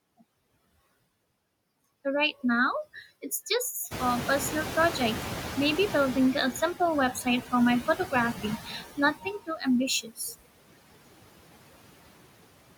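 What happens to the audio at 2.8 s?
Background noise dips away between words and swells back under them. These are noise suppressor artifacts, present throughout the clip: the suppressor cuts bands it judges to be steady noise by about 20 dB, frame by frame.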